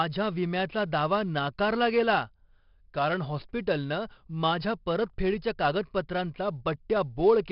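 From start to end the speech carries a gritty hiss that rises and falls with its loudness, roughens sharp onsets, and stops dead above 5.3 kHz. That is heavy 4-bit ADPCM compression, coarse adaptive steps, at what sounds like about 44 kbps.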